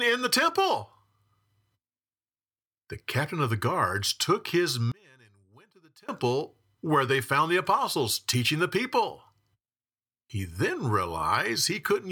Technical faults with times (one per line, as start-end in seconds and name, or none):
4.92-6.09 one channel inverted